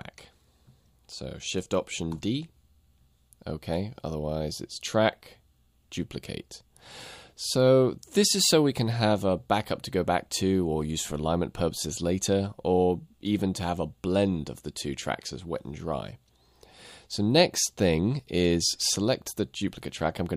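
No faults are audible anywhere in the audio.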